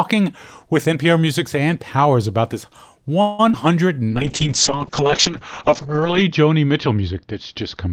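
At 3.21 s the speech halts for about 174 ms and ends at 3.41 s. This is a call audio freeze. The receiver keeps extending the last sound as a fading buzz or hiss rather than dropping to silence. The likely cause is packets held up in transit, which let the jitter buffer run dry. When the audio resumes, it picks up exactly where it stopped with nothing lost, so the only effect is an inserted pause. That sets it apart from packet loss, where real audio is gone.

Right after it come two short concealed packet losses, at 3.49 to 3.52 s and 3.52 to 3.55 s. In these, about 20 ms and then 40 ms of the call never reached the decoder. The receiver bridged each gap with a brief synthetic continuation and blended back into the real signal, so they come across as a quick smear or wobble rather than a pause. Because audio is actually skipped here, the delay added by the freeze shrinks by roughly 30 ms.

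From 3.94 to 4.12 s there is a jitter buffer slow-down. The receiver repeats individual pitch periods to rebuild its reserve, adding 40 ms and playing that stretch at 82% speed. The pitch stays put while sounds drag out. Unlike the freeze, the audio keeps moving instead of stalling.

A call bitrate drop begins at 4.10 s and lasts to the end. The encoder falls from 32 kbps to 7 kbps and stays at the lowest rate for about 2.1 s. Audio bandwidth narrows from 20 kHz to 8 kHz, so the speech turns muffled, rough and watery. This is a sustained loss of clarity across seconds, not a momentary glitch, which separates it from the brief concealment events.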